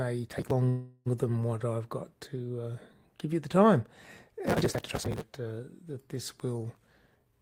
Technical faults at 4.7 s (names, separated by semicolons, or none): processor overload crackle